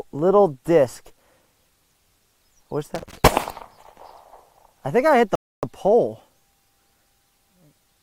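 Loose connector crackle runs from 2.95 to 3.18 s: a worn or dirty contact keeps making and breaking as it shifts, chopping the signal into an irregular scratchy burst, with pops where any DC on the line jumps at each break.

A rebuffering stall follows at 5.35 s: the player ran short of downloaded audio and halted, leaving about 0.28 s of silence before the sound picks up exactly where it stopped. Nothing is missing; the gap simply stretches the timeline.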